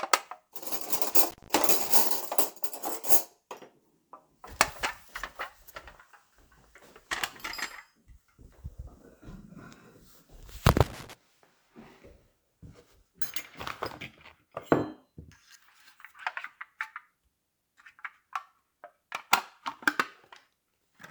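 From 0.92 to 1.89 s and again from 10.70 to 11.13 s, loose connector crackle breaks in as irregular scratchy bursts, a worn contact making and breaking that chops the signal. Unlike evenly spaced digital clicks, the crackle is erratic and clustered.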